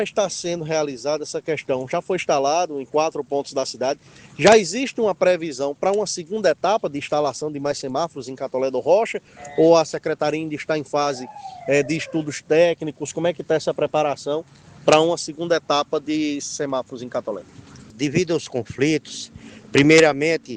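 No technical faults are audible.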